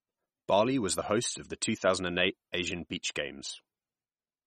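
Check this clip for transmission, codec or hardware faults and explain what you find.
One codec fault runs through the whole speech clip. It's likely MP3 compression: everything above 13.8 kHz is gone, and the plainly watery, swirly texture fits a starved bitrate around 32 kbps, with weak frequency lines dropping in and out between frames.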